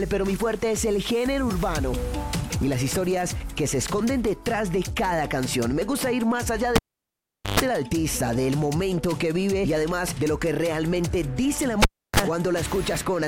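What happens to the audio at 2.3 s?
Nothing goes wrong at 2.3 s; the audio plays through that moment intact, with no dropout, click or other fault.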